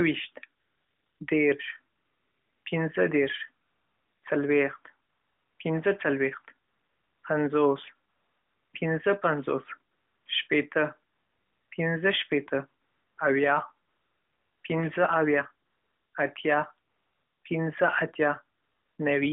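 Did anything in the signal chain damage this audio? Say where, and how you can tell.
Yes, at the codec stage: AMR comfort noise replaces the real background in thirteen pauses from 0.60 to 18.98 s, each 0.34 to 0.76 s, such as 1.96 s up to "پنځه دېرش". The transmitter stopped sending speech frames, and the receiver synthesised smooth, steady noise that switches in and out.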